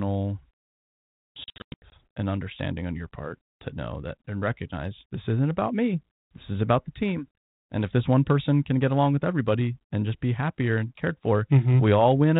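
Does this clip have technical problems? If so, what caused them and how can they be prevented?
Yes. Packet loss on an ADPCM call breaks up the speech from 1.44 to 1.92 s: about 320 ms of audio drops out in hard-edged silent gaps scattered over 480 ms, the longest lasting 100 ms. After each gap the decoder's adaptive predictor and step size no longer match the sender's, so the speech resumes with brief, slight distortion before settling. The underlying 32 kbit/s G.726 coding adds only light damage. Prevention: carry the call over a more reliable link with jitter buffering and loss concealment that resets the decoder state cleanly.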